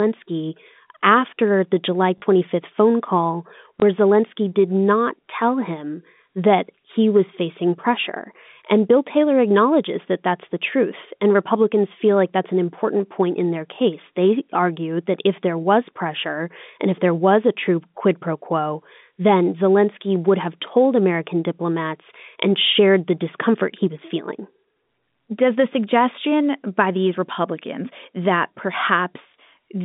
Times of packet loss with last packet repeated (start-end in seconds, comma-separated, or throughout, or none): 2.18-2.22, 3.80-3.82